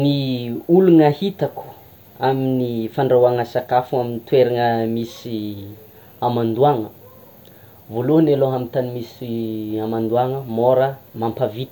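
No technical faults can be heard anywhere in this recording of speech.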